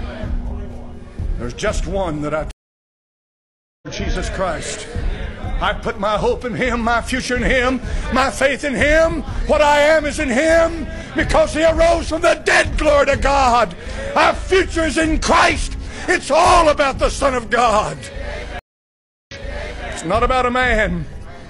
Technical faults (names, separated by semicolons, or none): stream reconnect